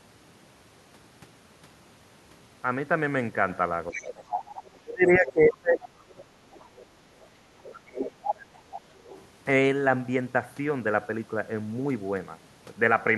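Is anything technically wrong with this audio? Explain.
Yes. Speech suppressed in double talk occurs at 3.92–4.13 s (a dip of about 10 dB), 4.74–7.1 s and 7.77–8.61 s (drops of about 30 dB), likely because the echo canceller attenuated both sides during overlapping talk.

The other side's voice leaks through at 3.92–4.7 s, about 10 dB below the speech, then in faint scraps at 7.63–7.75, 8.71–8.81 and 8.98–9.21 s, likely as loudspeaker echo that the echo canceller left in the microphone signal.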